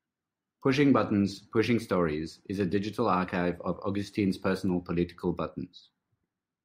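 A speech recording with nothing technically wrong with it.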